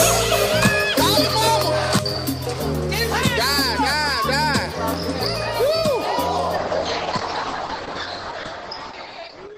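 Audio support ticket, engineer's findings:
Adaptive stream at a lower bitrate, 6.57 s to end. Abrupt step down in quality with no gap. Top end gone above 8.5 kHz, thin texture and codec artefacts. Consistent with the player switching from about 64 kbit/s Opus to about 12 kbit/s after a network slowdown. Unlike packet loss, there is no dropout or glitch. Unlike a fixed low-pass filter, the change is sudden and mid-stream.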